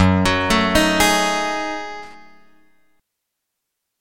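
A short irregular burst of loose connector crackle runs from 2.03 to 2.14 s, where a worn or dirty contact repeatedly breaks the signal path and adds scratchy crackle.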